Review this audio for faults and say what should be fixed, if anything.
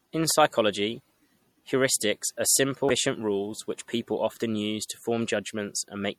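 Throughout the speech, sibilants sound watery and swirly, with a metallic chirp, and consonant attacks are smeared. This is likely MP3 compression at a low bitrate, plausibly around 64 kbps. The encoder ran short of bits, so it let weak frequency lines switch on and off between frames. Encoding from the original source at a higher bitrate, or using a lossless format, would prevent this.

From 2.86 to 2.91 s there is a short glitch. This is damaged data in a compressed stream. Some bytes of the encoded file were corrupted, so the decoder misread or rejected those frames, lost sync, and jumped ahead to the next valid frame header. Checksummed transfers, or a frame-level integrity check before decoding, would catch the corruption before playback.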